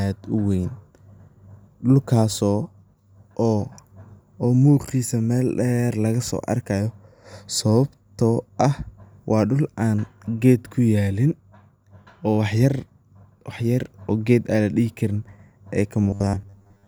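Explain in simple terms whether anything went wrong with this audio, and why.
From 16.03 to 16.87 s, just after "an ladihi karin ay", the speech turns into robotic sound from repeated short buffers, a flat metallic buzz near 100 Hz. Audio likely arrived too slowly, so about half was filled by replaying 10 ms snippets. Unlike a dropout, it never goes silent.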